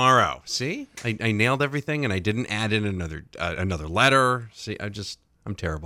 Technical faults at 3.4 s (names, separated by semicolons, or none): none